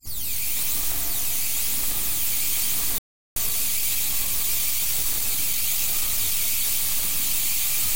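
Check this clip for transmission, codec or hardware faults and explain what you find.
Two related playback faults affect these everyday sounds. From 2.98 to 3.36 s the audio drops to silence for about 0.38 s, then resumes. This playback stall was likely the player running out of buffered data or having its thread blocked. From 3.36 to 6.36 s the sound runs hurried, about 1.1 times normal speed, at unchanged pitch. That time-compressed catch-up is the player cutting and cross-fading small slices to shed the backlog.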